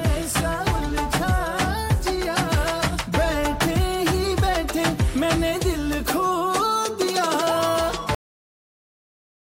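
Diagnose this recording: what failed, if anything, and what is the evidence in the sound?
Cut-off end at 8.15 s. The sound stops abruptly in mid-event and falls straight to digital silence, with no decay or natural tail, and that silence holds for the remaining 1.35 s. This points to the driver or buffer stage, or the final write to storage. The last buffers of audio were never written out or played, so the file simply ends where the data ran out rather than where the sound finished.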